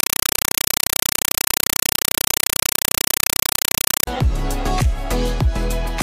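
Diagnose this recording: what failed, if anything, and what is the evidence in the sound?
Playback failed at the digital output. From 0.0 to 4.07 s, very loud chattering static replaces the sound. This is a compressed stream played as audio: undecoded AC-3 frames, heard as 5.33 ms noise bursts separated by silent padding at 31.25 Hz.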